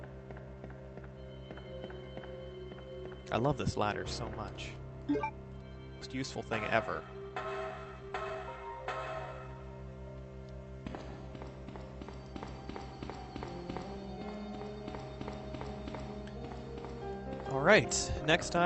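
At 6.01 to 6.03 s there is a skip ahead. Roughly a second of audio is simply gone. Nothing fills the gap. The sound on either side is joined almost directly, so playback lurches forward. This happens when a stretch is dropped in transit, or thrown out by an overfull jitter buffer, while later audio is already queued. The listener's delay shrinks by about a second in one step.

Just after, from 6.12 to 9.55 s, comes a jitter buffer speed-up. The audio runs at 115% speed with its pitch unchanged. It sounds hurried. The receiver is holding more audio than it wants. To shed that backlog, it cuts out short pieces of one or a few pitch periods, again and again. Around half a second is removed across these three and a half seconds.

The call path itself is audible as Opus coding noise and a high-frequency cut-off at 8 kHz. This fits a bitrate near 32 kbps.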